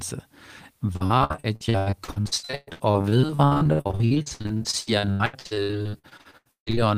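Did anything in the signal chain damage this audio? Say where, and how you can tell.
Yes: repeated packet loss (robotic sound) from 0.93 to 6.79 s, in the network stage. Dozens of gaps up to 153 ms are patched with repeated sound, making the speech choppy with pieces missing.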